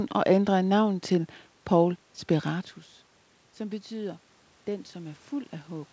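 Automatic gain rising from 3.57 s to the end: after the input level fell by about 15 dB, the gain control slowly pushed it back up, swelling speech and background together.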